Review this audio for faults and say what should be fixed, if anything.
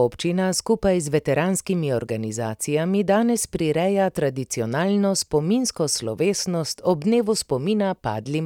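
Nothing stood out on listening, so there is nothing here that needs fixing.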